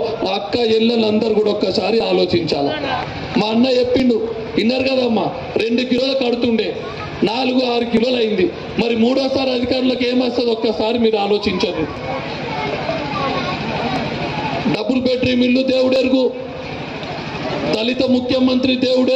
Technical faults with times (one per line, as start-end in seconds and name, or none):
2.00-17.94 periodic USB or driver dropouts